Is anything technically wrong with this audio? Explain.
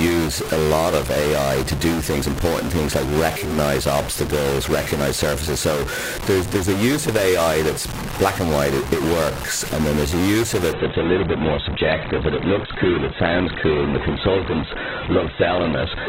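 Yes, there are two faults.

A stuck bit runs through the whole clip. The most likely cause is one data bit held permanently at 0 or 1 by a broken line or converter, so about half the samples are off by that bit's weight in a pattern that follows the waveform. The speech carries distortion, and because the error flips with the sign of small values, the pauses fill with noise instead of falling silent.

A drop to an adaptive stream at a lower bitrate starts at 10.73 s, just after "use of", and lasts to the end. The player switched to a lower-quality version of the stream, probably because the connection slowed. There is no gap, but the quality changes abruptly. Nothing is left above 4.2 kHz, and codec artefacts rise, which fits a fall from about 64 kbit/s to roughly 8 kbit/s Opus.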